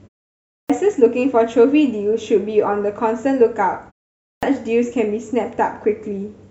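Speech in which the output device sleeps during silence and is slow to wake, producing a clipped start after a pause: about 0.26 s is swallowed at 0.44–0.70 s and 0.25 s at 4.18–4.43 s, so speech begins abruptly.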